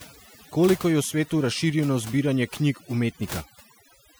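From start to finish the speech carries overdone noise removal. A spectral noise reducer set far too aggressively is gating individual frequency bands whenever their level sits near its noise estimate, and low-level parts of the voice fall below that threshold and are cut along with the noise. The gaps between phrases collapse to near silence speckled with chirpy, twinkling residue.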